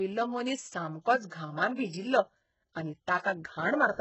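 Throughout the speech, the treble sounds rebuilt rather than recorded: gritty, lispy s sounds and nothing above 8 kHz, likely from heavy HE-AAC compression at a very low bitrate near 8 kbps, unlike a plain dull low-pass.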